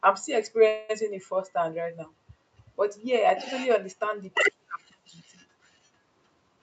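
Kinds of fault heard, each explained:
call audio freeze: At 0.67 s the sound stops moving forward, and the last moment is drawn out as a fading buzz for about 0.22 s, until 0.91 s. It never drops to silence. The audio then carries on exactly where it halted, with nothing skipped. The likely cause is packets held up in transit, so the jitter buffer ran dry and the receiver stretched the last sound to cover the wait, pushing everything after it 218 ms later.
jitter buffer speed-up: From 6.35 to 6.58 s the sound hurries, running at about 115% speed while the pitch stays the same, which gives a brief rushed quality near the end. The receiver's jitter buffer was holding more audio than it aims for. To bring the delay back down, it cut out a rapid series of tiny slices, each one or a few pitch periods long, removing around 50 ms in total.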